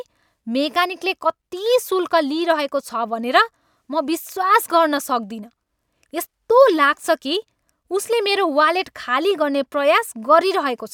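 No technical faults can be heard anywhere in this speech recording. Nothing in the signal stands out as needing a timestamp or an explanation.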